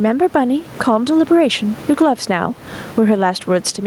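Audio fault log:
Throughout: gain pumping. The room noise, sitting about 29 dB below the speech, does not hold a steady level. It swells up in the pauses and drops away each time the speech gets loud, with a swing of around 15 dB between the two states. Loud and quiet passages come out closer in level than they should, giving a squashed, breathing quality. The likely cause is microphone gain set far too high, with a fast limiter or compressor clamping down on every loud sound.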